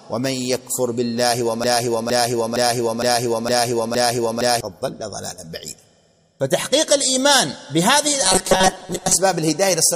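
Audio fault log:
1.64–4.61 s, broken-record loop: a 0.46 s fragment of sound repeats exactly, back to back, six times, and the audio that should have played there is lost. The likely cause is a stalled player or stream resending its last fragment. Unlike the robotic buzz, each repeat is long enough to recognise as a chunk.
8.22–9.17 s, robotic sound from repeated short buffers: a rigid metallic buzz at 188 Hz replaces most of the real audio while still roughly tracking its shape. This likely comes from fresh audio arriving too seldom, with a piece of about 5.3 ms repeated to fill the gaps. The loop is too short to hear as a fragment, so it becomes a fixed pitch.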